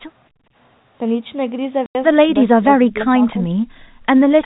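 Speech clip with three kinds of echo-canceller trouble and one network dropout. From 0.30 to 0.55 s the background is gated by the echo canceller: the room sound falls away by about 26 dB while the loudspeaker path is active, then comes back once the canceller releases. The same thing recurs, deeper, from 3.80 to 4.03 s, where the background drops by about 37 dB. At 1.86 to 1.95 s there is packet loss filled with silence: a 90 ms hole with abrupt edges, consistent with three 30 ms packets going missing and the receiver inserting digital silence. From 2.48 to 3.52 s the speech dips hard, at its deepest by around 30 dB, in patches adding up to most of that second; this is likely speech suppressed in double talk, with the canceller treating the near-end talker as echo while the far end was also speaking. In the last few milliseconds, from 4.42 s, a faint echo leak likely appears, a copy of earlier speech returning about 350 ms late and well below the direct level.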